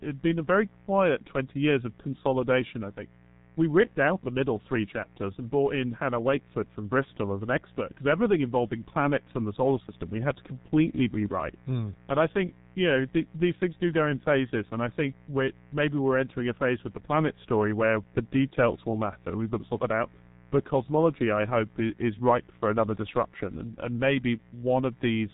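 A mains buzz runs under the speech from start to finish. Spikes from the 60 Hz supply leak in, leaving a steady, raspy hum well below the speech.

The whole clip also carries heavy G.723.1 codec damage. Nothing passes above 3.8 kHz, and the slow coarse coding fits about 6 kbit/s. The speech sounds muffled and hoarse, with smeared consonants.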